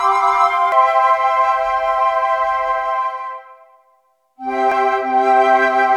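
At 0.72 s and 4.72 s, damaged data in the compressed stream makes the decoder misread frames and resync, producing a brief glitch in the sound.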